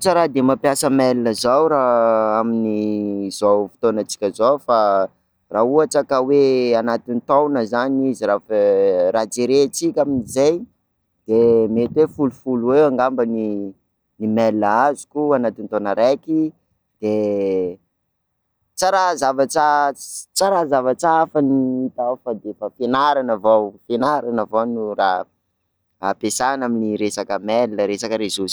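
No technical faults can be heard in the speech at any point, so there is nothing to place in time order.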